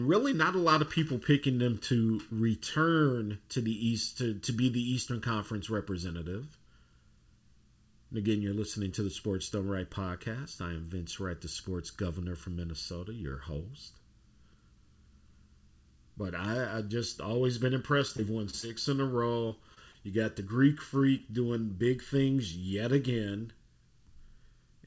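Right from the start and all the way through, the speech has a hollow, phasey colour. That's channel delay (comb filtering): one channel lags the other by just under a millisecond, and when the two are summed to mono the shared content cancels at regularly spaced frequencies. The first notch sits somewhere around 700 Hz, so the dip lands in the lower midrange. The top end stops at 8 kHz, which is just the G.722 call path at work.

From 18.08 to 18.71 s there's a burst of repeated packet loss, and the speech goes choppy. A handful of short holes open up in quick succession, the longest about 23 ms. Each one gets patched by stretching the last bit of sound, but the next hole arrives before things settle. The result is a choppy, stuttering patch with small pieces clipped out.

Right after that come three isolated cases of short concealed packet loss, at 19.48 s, 19.74 s and from 19.92 to 20.03 s. 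In each, roughly 20 ms of audio never showed up in time, and the receiver filled the hole by carrying the previous sound forward before blending back in. You hear a quick smear or wobble rather than silence. The last one also stretches playback by about 10 ms, so it drags ever so slightly.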